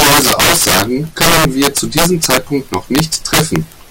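Integer overflow runs through the whole speech clip: the signal is driven about 12 dB past full scale, and instead of being limited, every peak over the ceiling wraps around to the opposite extreme. Around 7 percent of samples flip this way, producing violent, harsh cracks on louder syllables, far sharper than ordinary clipping.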